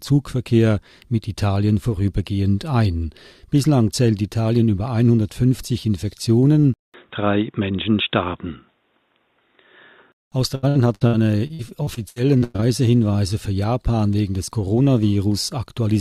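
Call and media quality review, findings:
6.74–10.32 s: sound turns dull and boxy, nothing above 3.8 kHz, 200 ms silence at onset, level shifts about 5 dB. Likely input switched to a poorer device.

10.55–12.64 s: choppy, robotic sound from repeated packet loss. Dropouts of up to 104 ms, each patched by stretching the previous sound, about a third of the span.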